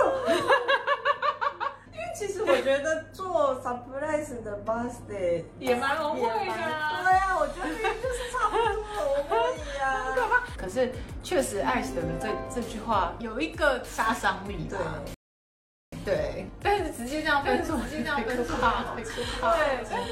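The audio has a rebuffering stall at 15.14 s: the player runs out of downloaded data, drops to silence for 0.78 s, then resumes at exactly the point where it stopped. No material is lost, but about 0.8 s of dead air is inserted into the timeline. From 17.25 s to the end, a doubled audio track appears. A second full-band copy of the same sound starts abruptly and trails the original by roughly 0.7 s, a few decibels quieter, with no reverberant decay or room colouring. The most likely cause is a second capture through a slower path, or an edit leaving two copies out of alignment.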